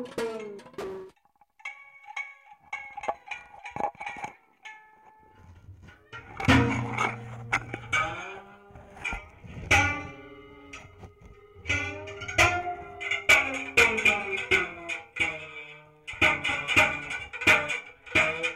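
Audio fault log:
Nothing to log here, as no faults turn up anywhere in this audio.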